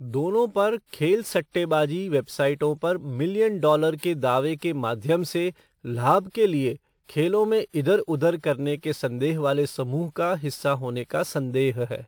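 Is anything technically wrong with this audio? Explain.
Yes, there are two faults.

Throughout the clip there is sample clock jitter. The converter's clock wanders by something like 7 microseconds, so each sample is captured slightly early or late. The timing error turns into an amplitude error wherever the waveform changes fast, producing a fine hiss and grittiness roughly 30 dB below the speech. It thickens on loud syllables and sibilants and disappears in the pauses.

Pre-echo occurs twice, from 7.04 to 7.09 s, about 52 ms, and from 7.69 to 7.74 s, about 46 ms. In each case the codec's block held a sharp onset near its end, so the quantisation noise budgeted for the loud attack was spread across the quiet stretch before it. You hear a brief hiss rising just ahead of each attack, and the attack itself lands softened and smeared.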